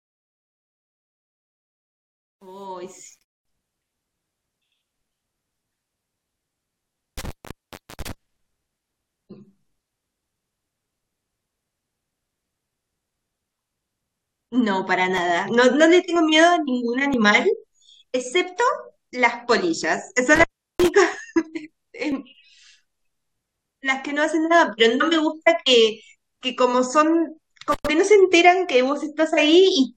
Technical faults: truncation distortion on a fade; intermittent contact; overlap between stream segments

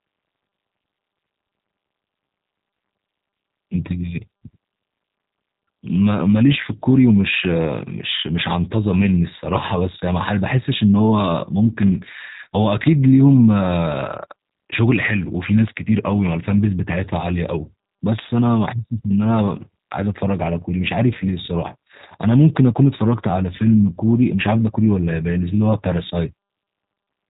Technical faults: G.729 codec

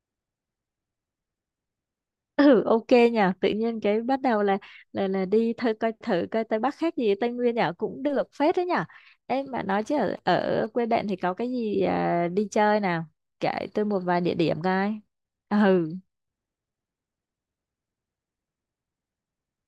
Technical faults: GSM signalling bursts

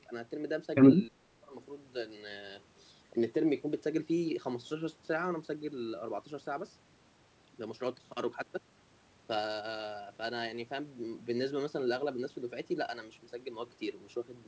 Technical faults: speech suppressed in double talk

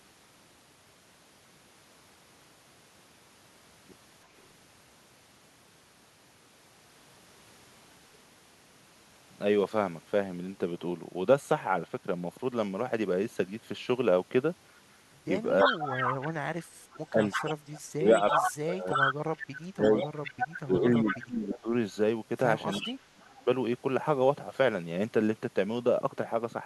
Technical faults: echo leak; speech suppressed in double talk

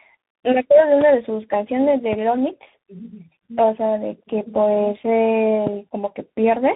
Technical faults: tandem speech coding

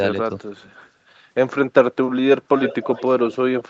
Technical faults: echo leak

